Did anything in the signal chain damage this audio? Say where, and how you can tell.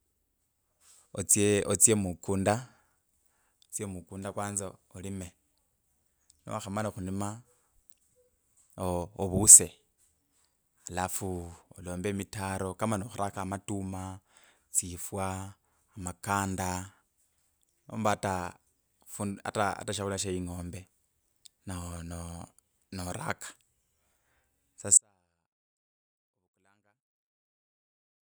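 Yes, there's an audio dropout to a faint residue at 24.97 s. The speech cuts off abruptly and stays gone to the end, leaving only a faint leak around 40 dB down. The path after the break stays live, so it's likely a connection or analogue wiring fault.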